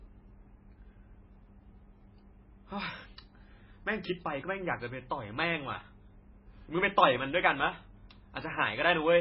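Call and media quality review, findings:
MP3 compression, throughout the clip. Heavy damage: nothing above 5.6 kHz, watery and swirly speech, smeared onsets. Likely an MP3 encoder starved of bits, fitting a bitrate near 16 kbps. The treble is cut at a fixed frequency, and weak spectral lines are zeroed and flicker frame to frame.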